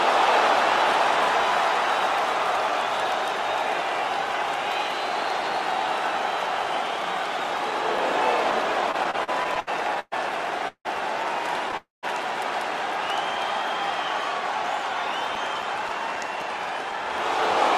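From 6.64 to 8.52 s there are eight small, regular ticks, about four a second and each only a few milliseconds long. These are CD scratch ticks: once per disc revolution, a blemish wiped out more data than error correction could rebuild, so the player patched or muted those samples.

From 8.91 to 10.14 s the audio stutters and drags, halting nine times. The longest halt is 122 ms, and the halts add up to about a quarter of that stretch. These repeated stalls come from packets arriving late, so the jitter buffer kept running dry. The receiver stretched the last sound to fill each wait, and nothing was skipped.

At 10.68 to 10.87 s the sound hangs for 171 ms, with the last 80 ms falling silent. At 11.77 to 12.05 s it hangs for 260 ms, with 170 ms of silence. Both are call audio freezes, likely caused by packets held up in transit. The audio then resumes exactly where it stopped, shifted later.

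From 14.55 to 17.18 s the scratch ticks return. There are eleven of them, again about four a second, and the longest is roughly 5 ms.

Overlapping that, from 16.27 to 16.99 s, the audio sounds slightly hurried at unchanged pitch, running about 6% fast. This is a jitter buffer speed-up. Holding too much audio, the receiver trimmed out short pitch-period pieces, about 50 ms in total, to cut its delay.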